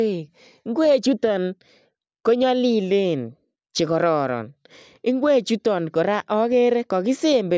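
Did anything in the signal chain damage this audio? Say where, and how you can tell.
No, nothing in the signal chain damaged this audio.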